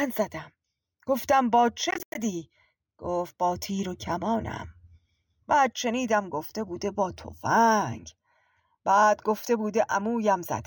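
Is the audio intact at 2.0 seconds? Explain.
No. Between 1.91 and 2.17 s the speech breaks into short silent holes totalling about 152 ms, the longest about 91 ms. Each picks up as though it had played on. This is likely a Bluetooth dropout, with late packets discarded before the headphones. The waveform shows flat gaps and the spectrogram blank vertical slices, both with abrupt or briefly faded edges.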